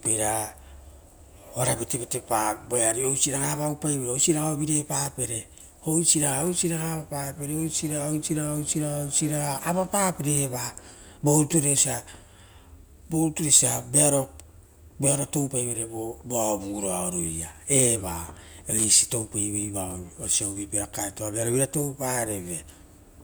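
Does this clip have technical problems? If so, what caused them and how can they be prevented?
Yes: loose connector crackle at 5.04–5.12 s and 18.78–18.88 s, each burst roughly 80–100 ms of irregular scratching. A worn or dirty contact was intermittently opening and closing, chopping the speech signal. On the waveform, these bursts appear as ragged dropouts and sharp spikes, and on the spectrogram as broadband vertical streaks. Cleaning or replacing the connector and securing the cable so it cannot flex at the joint prevents it.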